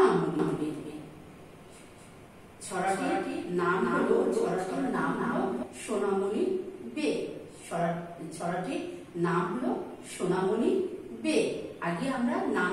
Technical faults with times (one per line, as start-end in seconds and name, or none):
0.39-5.63 doubled audio track